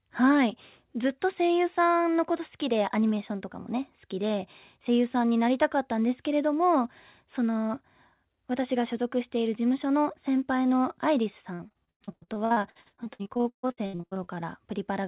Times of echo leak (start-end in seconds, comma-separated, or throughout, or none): none